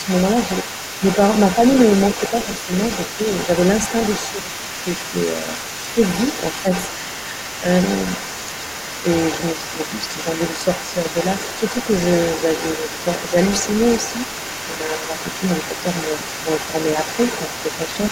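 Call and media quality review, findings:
Call and media quality review, findings:

Other side's voice leaking through: second voice audible under the talker for the full clip, 0 to 18.1 s, roughly 10 dB below the main speech. Likely residual echo from the talker's loudspeaker: echo canceller not fully subtracting far-end playback from the mic signal, so the remainder goes back out to the far end.

Speech suppressed in double talk: talker level dips by around 5 dB at 4.44–4.64 s, 9.54–9.79 s, 14.7–15.26 s and 15.71–16.75 s, affecting roughly 150, 70, 300 and 300 ms, longest in the last two. Likely echo canceller or suppressor attenuating the near-end path while both sides speak, unable to separate local speech from the echo.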